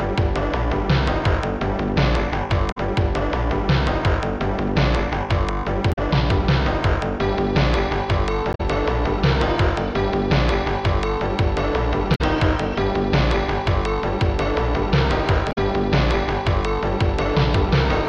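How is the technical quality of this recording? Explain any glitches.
Five short glitches interrupt the recording, all the same kind of fault: damaged data in a compressed stream, at 2.68–2.78 s, 5.89–5.99 s, 8.50–8.61 s, 12.12–12.21 s and 15.49–15.58 s. Each lasts about a tenth of a second. At these points the encoded data is corrupt, so the decoder misreads or rejects the affected frames, loses its place in the stream and hunts for the next valid frame header. The sound breaks up briefly at each spot before normal decoding resumes.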